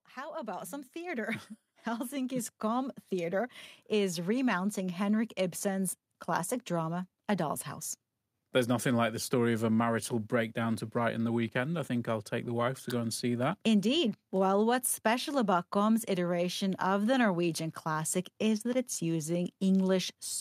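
Automatic gain rising runs through the opening of this speech recording, from 0.14 s to 5.68 s, ending just before "classic drama". The gain control judged the incoming level too low and pushed its amplification up gradually, by about 12 dB in total, so the talker and the room noise beneath them swell together over those five and a half seconds rather than jumping at once, leaving the start noticeably quieter than what follows.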